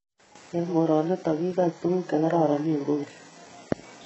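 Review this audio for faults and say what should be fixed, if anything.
HE-AAC compression, throughout the clip: the speech has nothing above 8 kHz, and its upper range sounds synthesised rather than recorded. It is likely spectral band replication, which copies lower bands upward under a coarse envelope, so harmonics misalign and s sounds turn gritty and lispy. The heavy damage fits a very low bitrate, around 8 kbps. To prevent it, encode at a much higher bitrate or with a full-band codec that does not reconstruct the treble.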